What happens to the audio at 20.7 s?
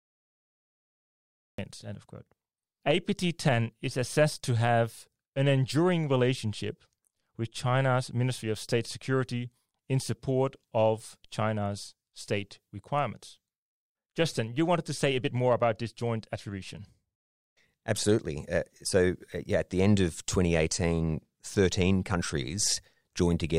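Nothing goes wrong at 20.7 s: the speech runs on intact through that moment, with no dropout, click, distortion or other fault to be heard.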